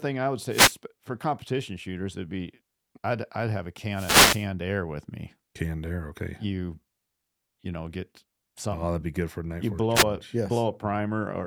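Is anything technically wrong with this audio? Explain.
Yes. The speech has three wireless microphone noise hits: 0.48 to 0.76 s, after "I would"; 3.89 to 4.48 s, after "I'd I'd have a"; and 9.94 to 10.04 s, just before "a yes". The FM radio link fades as reflected signals cancel, so receiver noise swells into a swish or burst of static. Unlike a digital dropout, the sound isn't cut to silence but overlaid with hiss.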